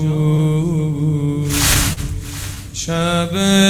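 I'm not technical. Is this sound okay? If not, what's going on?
No. There are three related timing problems.

The first is clock drift between sender and receiver. The device that sent this sound keeps time slightly slower than the one playing it, by about 3 percent. The player keeps running short of sound to play. Unlike a single glitch, this causes a recurring pattern of small hiccups at uneven gaps across the clip rather than one noticeable break.

The second is a set of repeated timing corrections, from 0.76 s to 3.67 s. To keep up, the player repeatedly repeats tiny pieces of sound. Together they stretch this stretch out by about 70 ms, so it plays at about 98 percent speed. Each repair is very small and they fall at uneven gaps, so if you notice anything at all, it is a slightly unsteady pace or faint stumbles, not obvious skips.

The third is a short stall from a late packet, at about 1.93 s. 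One piece of sound arrived late, and the player held the previous sound for 38 ms until it came. Nothing is lost. Unlike a dropout, there is no gap or silence. Instead, a sound lingers a moment too long, perhaps with a slight buzz, and then carries on.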